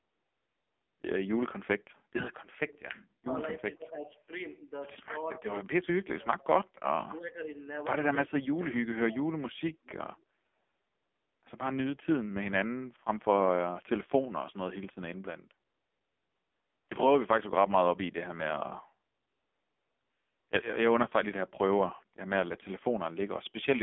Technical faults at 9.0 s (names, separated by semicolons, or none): AMR narrowband mobile codec; speech suppressed in double talk